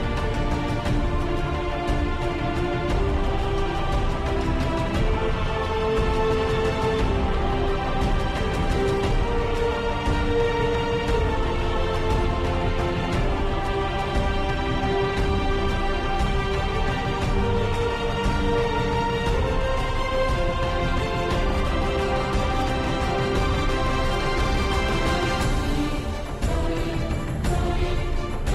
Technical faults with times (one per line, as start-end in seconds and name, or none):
none